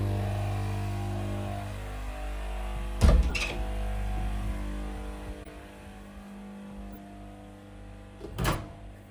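At 3.29 to 3.34 s, 5.43 to 5.48 s, 6.91 to 6.97 s and 8.50 to 8.55 s the everyday sound is broken by a short glitch, each a corrupt frame decoded. Flipped bits in a few compressed frames were played anyway, so misread gains and codes put energy at the wrong frequencies for roughly 50 to 60 ms. The first and last bursts are fairly loud; the middle two are quieter.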